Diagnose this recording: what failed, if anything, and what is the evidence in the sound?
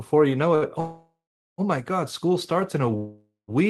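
A late packet at the network and jitter-buffer stage caused a short stall from a late packet. The buffer ran dry at 0.55 s, and the receiver held the last fragment of speech for about 65 ms, until 0.65 s, when the delayed packet arrived. Playback then resumed from the same point, so no speech is lost. The effect is a briefly drawn-out sound with a faint buzz or dip, and everything after it plays 65 ms later.

Two longer breaks are call audio freezes, likely caused by packets held up in the network long enough to empty the jitter buffer. From 0.80 to 1.61 s, the last sound is stretched into a fading buzz or hiss that decays into about 440 ms of silence before speech picks up where it stopped. This inserts roughly 0.78 s of delay. The same pattern repeats from 2.97 to 3.51 s, with about 170 ms of silence and roughly 0.51 s added. Nothing is cut from the speech in either break.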